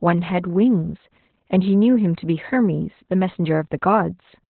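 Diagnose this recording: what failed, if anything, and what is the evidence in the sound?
The speech sounds muffled, hoarse and faintly robotic across the whole clip, with nothing above about 4.3 kHz, which gives it a telephone-like narrowband quality. This is Opus voice compression at the codec stage. The band limit and the coarse, buzzy excitation point to the SILK linear-prediction coder running at a very low rate, around 8 kbps. At that rate the encoder narrows the band to 4 kHz and quantises the excitation so roughly that the voice loses its natural texture.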